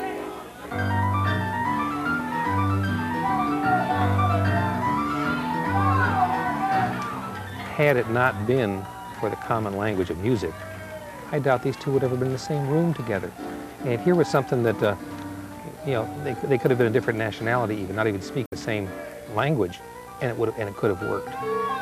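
Damaged data in a compressed stream appears from 18.46 to 18.53 s, a disruption lasting about 76 ms. At this point the encoded bitstream holds bytes that are missing, zeroed or overwritten. The decoder misreads or rejects the affected frames, loses its sync with the frame boundaries, and scans ahead for the next valid frame header before normal decoding resumes. The result is a brief, harsh chirp or blip that cuts across the surrounding sound.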